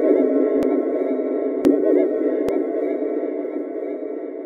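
At 0.54–0.63 s, 1.56–1.74 s and 2.49 s, compressed frames are skipped: the audio jumps ahead roughly a tenth of a second, not dropping into silence.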